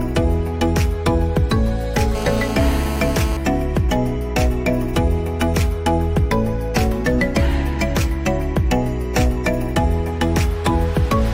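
From 2.15 s to 3.37 s, a GSM phone buzz sits under the audio. A 2G handset nearby is on a call, sending radio bursts about 217 times a second. The audio circuit rectifies those pulses into sound. The result is a hard, raspy buzz at about 217 Hz, thick with harmonics. It stays nearly steady, as a call does. It runs about 10 dB below the signal and has nothing to do with it.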